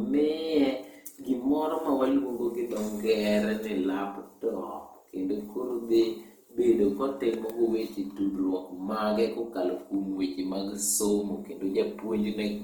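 From start to finish the speech has a rough, grainy texture, with tonal parts turning noisy rather than swirling, and the top end still reaches about 20.1 kHz. The damage is plainly audible. This is likely Opus compression in its music (CELT) mode: the encoder preserves each band's energy but, short of bits, fills detail with folded copies of lower bands or noise, which fits a rate around 24 kbps.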